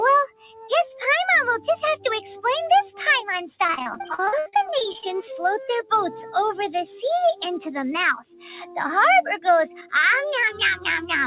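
Throughout the clip, a noise suppressor applied to music or sounds makes the level swing by roughly 5 dB. Held and fading parts sink while attacks pass, giving a pumping, thinned quality rather than outright gaps. Everything sits in a band that stops at 4 kHz, which fits a G.711 telephone codec.

From 0.27 to 0.71 s, the sound is cut by the noise suppressor, dipping about 18 dB at its deepest. Steady or fading sound sinks while sudden sounds mostly come through.

From 3.64 to 5.07 s, repeated packet loss produces robotic sound. Holes up to 72 ms recur quickly, and about a third of the stretch is patched by repeating earlier sound. It turns choppy, with pieces missing instead of merely dimmed.

The suppressor cuts return at 8.22 to 8.45 s, dipping about 11 dB, and at 9.76 to 9.93 s, dipping about 12 dB. These are shorter softenings of sustained sound, not the broken, choppy texture of the packet loss.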